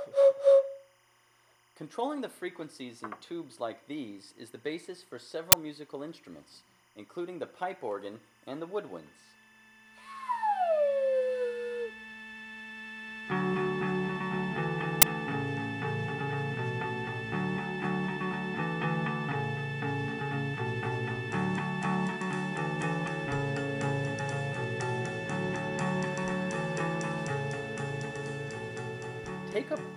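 From the start and running the full length, a faint chirping warble sits behind the sound. This is timecode bleed: linear timecode from an adjacent track or cable has leaked into the audio path. The code is a square wave that flips between tones near 1 kHz and 2 kHz as it encodes bits, and its structure repeats 25 times per second, giving the steady frame-rate flutter. It sits roughly 35 dB below the programme.

At 5.52 s and again at 15.02 s there is a sharp, loud burst of digital noise, each lasting about 12 ms. These are uninitialised buffer faults: a playback block was sent out before any audio had been written into it, so whatever data was left in that memory was played as samples. The length of each burst fits a 512-sample buffer. The result is a harsh click-like crash.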